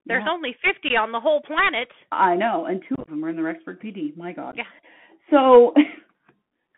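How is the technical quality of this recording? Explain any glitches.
The recording has poor technical quality: it is narrowband, codec-damaged Bluetooth headset speech with three bursts of dropout.

Bluetooth CVSD headset codec, throughout: the audio was carried over the narrowband Bluetooth headset codec, whose sound fits a 64 kbps CVSD link. Each sample is coded as a single up-or-down step whose size adapts. Fast, loud high content outruns the step, so sibilants turn scratchy over a granular hiss. On a spectrogram, energy sits between about 150 Hz and 3.4 kHz, with a hard ceiling and nothing above it.

Unconcealed Bluetooth headset packet loss, at 0.89 to 0.91 s, 2.95 to 3.10 s and 4.51 to 4.56 s: voice packets between headset and phone were lost, and silence or an idle pattern filled each gap with no concealment. The first event is a single 15 ms hole. The second event is roughest, with about 79 ms missing across 128 ms in runs of up to 22.5 ms, so the sound is chopped and crackly. 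The third event loses about 19 ms across 38 ms. On the waveform these appear as abrupt gaps with sharp edges. On the spectrogram they are vertical blank slits, and the edges can click.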